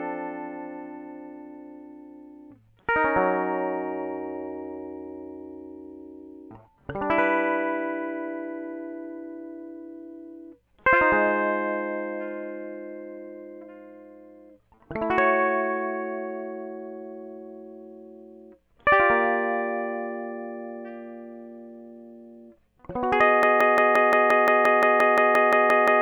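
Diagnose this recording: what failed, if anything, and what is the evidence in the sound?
At 23.43 s the music seizes into a broken-record loop: a 175 ms fragment repeats exactly, back to back, about 15 times until the recording ends, and the music that belonged there is gone. On a waveform the same short shape tiles identically; a spectrogram shows a repeating block pattern with a hard seam every 175 ms. The likely cause is a stall at the playback or streaming buffer stage, which kept resending the last fragment it held.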